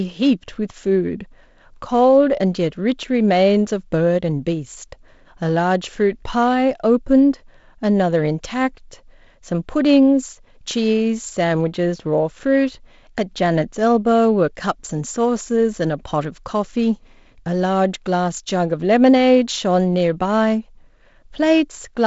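No technical faults can be heard in this speech.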